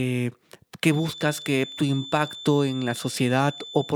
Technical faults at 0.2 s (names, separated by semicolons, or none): none